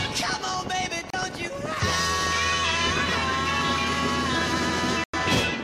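Digital broadcast dropout cuts the audio twice, first from 1.10 to 1.14 s and again from 5.04 to 5.14 s. Each time the receiver stopped getting usable frames, either because the signal was lost or because frames failed their checksum, so it muted instead of playing corrupt data. The first hole lasts about 32 ms, which fits a single lost frame. The second lasts about 96 ms, which points to three consecutive frames. Whatever was broadcast during those gaps is gone, and the sound simply picks up again later in the programme.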